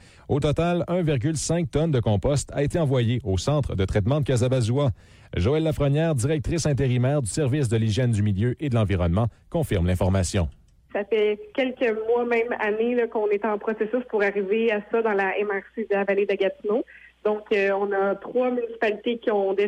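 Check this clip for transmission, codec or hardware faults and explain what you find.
No faults detected here.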